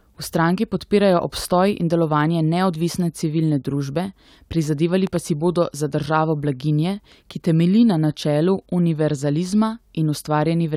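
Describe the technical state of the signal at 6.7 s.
At 6.7 s the speech signal is intact, with no audible fault at that moment.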